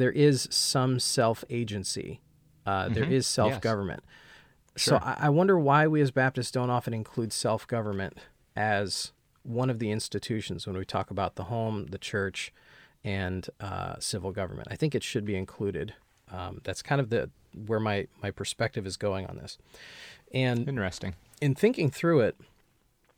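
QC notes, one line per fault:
No faults found in the speech on this pass; nothing to log.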